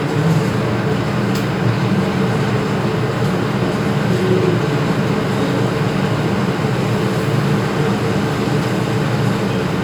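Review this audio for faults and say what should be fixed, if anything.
Nothing stood out on listening to this recording of sounds, so there is nothing here that calls for fixing.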